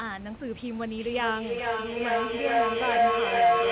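Two devices on the same call in one room form a loop that gains level on each pass, so from 0.97 s to the end this speech clip carries a feedback howl near 700 Hz, pulsing at roughly 400 ms and peaking about 11 dB above the speech, with the audio capped at 4 kHz as narrowband call audio.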